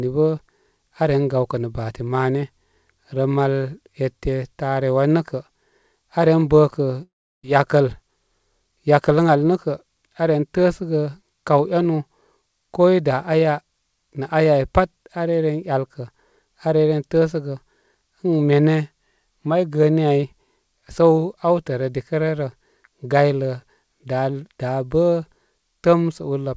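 At about 7.03 s the speech cuts out for roughly 0.4 s, until 7.44 s. A fading buzz trails off and leaves about 0.35 s of near-silence. That's likely a long network dropout, with the lost stretch simply gone when audio resumes, all over a call path with nothing above 8 kHz.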